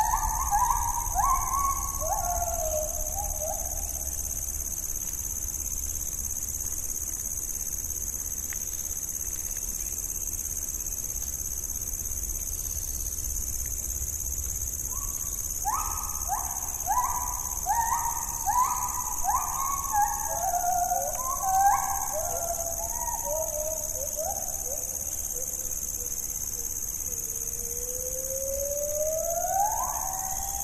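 No technical faults are audible.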